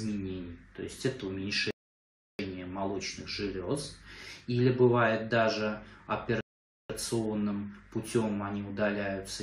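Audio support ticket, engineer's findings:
Rebuffering stall at 1.71–2.39 s: sound stops dead, then picks up exactly where it left off, adding about 0.68 s. Player buffer ran dry waiting on the network. Second stall at 6.41–6.90 s, about 0.49 s added, same mechanism. Unlike a dropout or packet loss, no audio is missing. The material before and after joins seamlessly with only silence inserted, so total duration grows. Check delivery throughput and player buffer thresholds.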